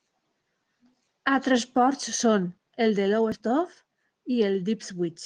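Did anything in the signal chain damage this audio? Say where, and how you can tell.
No, nothing in the chain damaged this speech; it has passed through Opus voice compression, and the retained full bandwidth with only a light coding texture fits a hybrid-mode stream at around 20 kbps working as designed.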